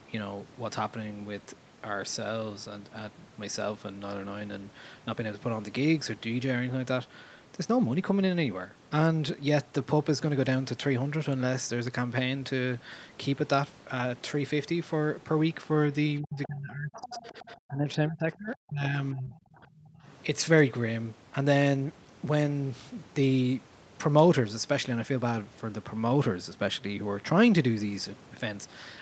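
Speech suppressed in double talk runs from 16.21 to 19.35 s. For about two seconds of that stretch the talker's speech dips and breaks up, falling by roughly 25 dB at its deepest. The likely cause is an echo canceller facing both sides talking at once. Unable to separate the near talker from the loudspeaker echo, it pulled the level down on both.

The other side's voice leaking through overlaps that stretch, in two pieces. The first is a brief scrap from 16.43 to 16.47 s, about 20 dB below the main speech. The second is a longer passage from 16.93 to 17.55 s, about 15 dB below. This is likely loudspeaker playback that the echo canceller failed to remove fully from the microphone signal, so a faint second voice sits under the talker.

Speech suppressed in double talk returns from 19.57 to 20.07 s. Roughly 0.4 s of that window is turned down, again by about 25 dB at its deepest, so the speech briefly sinks and chops. 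The likely cause is the same echo control clamping down while both sides overlap. The entire recording is band-limited at 8 kHz, which fits an Opus call codec at a modest bitrate.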